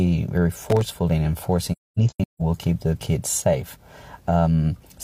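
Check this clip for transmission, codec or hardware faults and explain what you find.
Two faults are present.

From 0.70 to 0.96 s there is processor overload crackle. The processor missed many audio buffer deadlines again and again over a short stretch. Each miss left a tiny silent gap with hard edges. It sounds like a gritty, crackling tear over the sound. The gaps fit very short buffers of around 1.5 ms.

From 1.72 to 2.41 s there is AAC frame loss with muting. Frames were lost, and the decoder zeroed their spectrum. The audio fades out and back in over about a frame at each edge. About 512 ms of sound is missing across roughly 683 ms. The longest hole lasts around 0.3 s.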